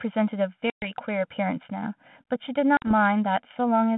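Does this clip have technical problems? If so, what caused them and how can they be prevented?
Yes, two things going on.

Channel delay comb filtering runs the whole way through. One channel lags the other by about 1.5 ms before they're summed to mono, which cuts regular notches starting around 400 Hz, so everything sounds hollow and phasey. To prevent it, time-align the channels or just take a single channel instead of summing.

Packet loss on the ADPCM call punches hard-edged holes at 0.70 to 0.98 s and 2.77 to 2.93 s, losing about 120 ms and 50 ms. Afterwards the decoder's predictor is out of step with the sender's, so speech comes back briefly with a bit of grit. To prevent it, use a jitter buffer with loss concealment that also resyncs the decoder state.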